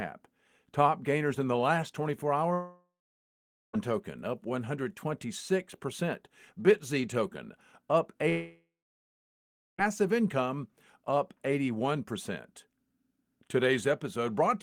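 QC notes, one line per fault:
2.53–3.76 s and 8.29–9.81 s, long network dropout: likely lost incoming audio left 1.2 s and 1.5 s gaps. The receiver stretched the last sound into a brief fading buzz or hiss, then about 0.83 s and 1.1 s of silence. Speech resumes with those stretches missing.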